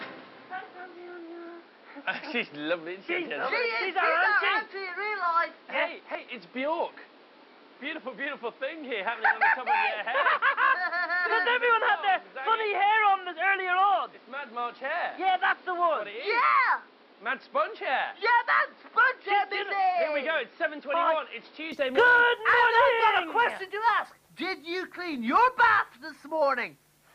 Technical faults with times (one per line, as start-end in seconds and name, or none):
0.00-21.72 input switched to a poorer device